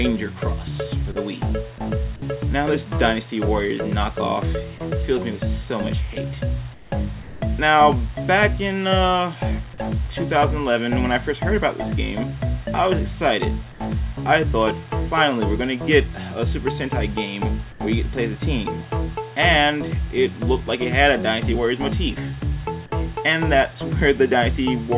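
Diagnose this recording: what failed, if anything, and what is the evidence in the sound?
Sound dropped by the voice detector: in the call processing stage, the sender's voice detector likely mistook live sound for background and stopped transmitting. At 1.12 s, 2.16 s and 7.22 s the sound cuts out for 40, 60 and 200 ms, replaced by steady noise until the detector triggers again.

Comfort noise in place of the background: during pauses, the sender's discontinuous transmission likely halted the stream and the receiver synthesised filler. At 6.74 s (180 ms), 13.72 s and 17.72 s (80 ms each), the real background becomes featureless hiss, about 8, 4 and 6 dB quieter, within the call's 4 kHz band.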